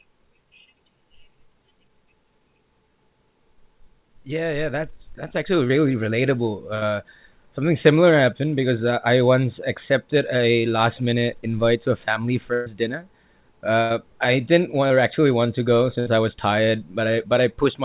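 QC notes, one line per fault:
5.68–5.71 s and 14.88–14.92 s, short concealed packet loss: about 20 ms of the call arrived too late to decode each time, so the receiver extended the preceding sound for 13 ms and 19 ms, then crossfaded back. Each gap is heard as a brief smear or wobble in the speech.
6.75–6.83 s, 12.53–12.68 s, 13.82–13.92 s and 16.00–16.08 s, burst of packet loss: runs of packets were lost, 60, 120, 80 and 60 ms respectively. The decoder held and faded the last sound across each gap, so a voiced sound becomes a held buzz and an unvoiced one a fading hiss. Playback then resumes with that stretch missing. The longest gap follows "invite to a family", one falls just before "I didn't", and the last sits between "actually want to go" and "I was tired".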